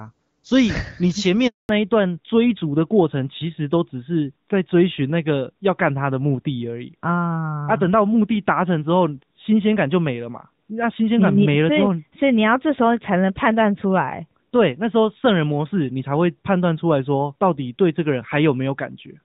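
At 1.47 s the speech fades out within a few tens of milliseconds and stays silent until 1.69 s, a dead stretch of 220 ms. This is a handover gap: the call switched networks and no speech frames arrived during the move, so that moment is simply missing.

From 1.69 s to the end, the speech loses its top end. Nothing survives above 4 kHz, and the sound turns duller and rougher than the clear HD Voice before the break, whose light coding fits AMR-WB at around 12.65 kbit/s. This is a fallback to narrowband: after the handover the call dropped to an older narrowband codec, most plausibly AMR-NB at about 12.2 kbit/s, which cannot carry the upper band.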